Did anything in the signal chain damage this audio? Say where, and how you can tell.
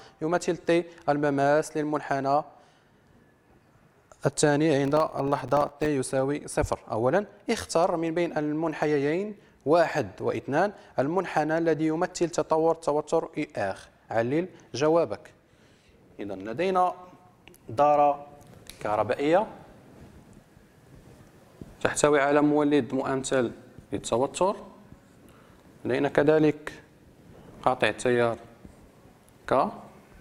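Yes. From 4.85 to 5.86 s a gritty burst of crackle tears through the sound: processor overload crackle at the driver or buffer stage. Dozens of tiny, hard-edged silent gaps pile up, each a very short buffer of a millisecond or two that the busy processor missed.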